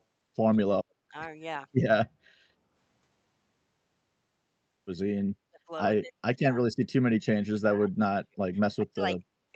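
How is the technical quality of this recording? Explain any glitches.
The speech keeps ducking out: at 0.65–0.93, 1.09–1.14, 5.47–5.6, 5.99–6.64, 7.54–8.46 and 8.76–9.29 s it drops by up to about 30 dB. That's speech suppressed in double talk, likely from an echo canceller muting the near talker while the far end spoke. The band topping out around 8 kHz fits an Opus call path.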